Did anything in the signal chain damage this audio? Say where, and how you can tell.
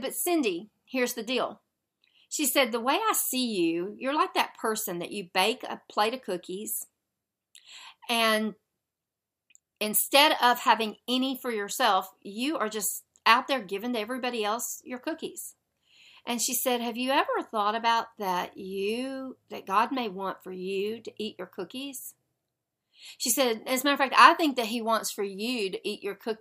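No, nothing in this speech recording stood out on listening as damage from any stage of the signal chain.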